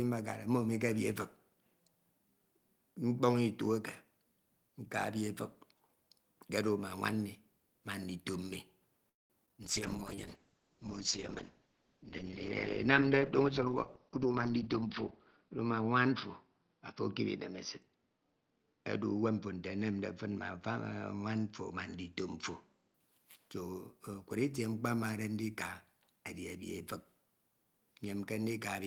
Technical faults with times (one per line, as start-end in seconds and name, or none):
9.09-9.32 call audio freeze
9.46-9.55 short concealed packet loss
9.63-23.00 call bitrate drop
13.22-13.67 jitter buffer speed-up
14.09-14.84 jitter buffer speed-up